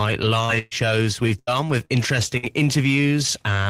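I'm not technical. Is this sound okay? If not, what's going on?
No. Two kinds of fault interrupt this speech recording.

Short concealed packet loss happens at 0.45 to 0.51 s and at 1.85 to 1.91 s. Each time, about 40 ms of the call arrived too late to be played. The receiving phone or app covered the hole by stretching out the sound just before it and then blending back in. You hear a quick smear or wobble, and a brief sound there may be lost.

A burst of packet loss happens at 0.59 to 0.73 s, 1.39 to 1.49 s and 2.37 to 2.45 s. These gaps are longer: about 120, 80 and 60 ms of audio went missing. The receiver kept the last sound going as a held buzz or hiss that fades, then jumped ahead to where the speech had moved on, so a small piece is skipped each time.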